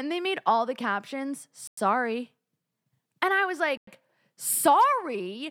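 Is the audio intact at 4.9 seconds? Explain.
Yes, at 4.9 seconds the speech plays through intact, with no audible fault at that moment.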